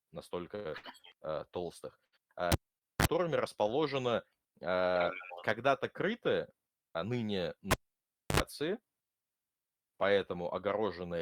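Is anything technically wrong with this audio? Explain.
Yes. The speech is interrupted by three short stalls from late packets and two cable pulled and plugged in events.

Short stalls from a late packet occur at 0.55–0.68 s, 0.77–0.86 s (just before "э толстых") and 2.05–2.15 s (just after it). In each case the jitter buffer ran dry and the last sound was stretched for about 65–96 ms, which adds delay rather than dropping audio. What you hear is a held sound with a slight buzz or dip, not a gap.

The cable was pulled and plugged in at 2.52–3.05 s (after "э толстых") and again at 7.71–8.40 s. Each event starts with a pop, followed by near silence for roughly 450 ms and 640 ms. A brief 50 Hz mains buzz follows, lasting about 30 ms in the first event and 70 ms in the second, and a second pop marks the signal's return. The pops, the silence and the hum set these apart from the stalls.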